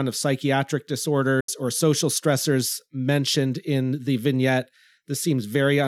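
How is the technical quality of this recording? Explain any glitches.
One glitch stands out. From 1.40 to 1.49 s, after "of psychiatric", the sound cuts to silence for 75 ms. It is likely a Bluetooth dropout, with late packets discarded. Speech then resumes at "or social stressors mentioned".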